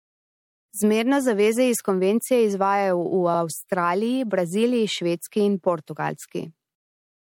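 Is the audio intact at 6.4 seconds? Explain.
No. From 6.42 to 6.44 s there are repeated frames. One compressed block of about 26 ms was stored or sent twice, so the decoder plays it again right away. You hear a brief stutter, a tiny slice of the speech said twice in a row. The repeat adds 26 ms, so everything after it arrives that much later.

The same moment also carries MP3 compression damage, as does the whole clip. It is plainly audible. The sound is watery and swirly. Weak frequency detail flickers on and off from frame to frame, and sharp onsets smear. This is likely a low-bitrate MP3 encode, which fits about 64 kbps. At that rate the encoder runs short of bits and discards what its hearing model rates least important.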